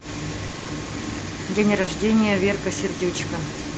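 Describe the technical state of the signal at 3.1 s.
At 3.1 s the speech passes through the WebRTC call path intact, with no fault present at that moment.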